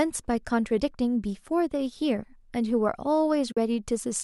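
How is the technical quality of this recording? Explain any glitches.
The recording has one glitch, an AAC frame loss with muting, heard as a brief gap in the speech from 3.52 to 3.57 s. The coding itself carries only light artefacts, likely from low-delay AAC compression.

About 50 ms of audio is missing, which fits roughly five short frames dropping out. The decoder filled them with silence, and because its overlapping windows fade out into the gap and back in after it, the hole has soft edges. A hard sample dropout would snap. Concealment by repetition would leave a buzzy or smeared echo of the preceding sound rather than a clean, faded silence.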